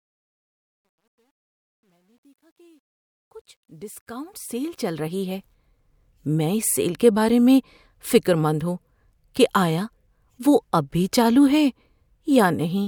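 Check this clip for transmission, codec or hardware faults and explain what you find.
One fault shows up, during the fade-in at the start of the speech. From 0.0 to 5.54 s there is truncation distortion on a fade: the gain stage keeps too few bits and adds no dither, which fits roughly 11-bit resolution. Up to 3.69 s the quiet signal collapses into coarse square steps, sounding gritty. The waveform shows staircase blocks, and the spectrogram shows broadband harmonic smear.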